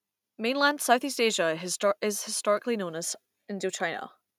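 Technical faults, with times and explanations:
No technical faults detected anywhere in this speech recording.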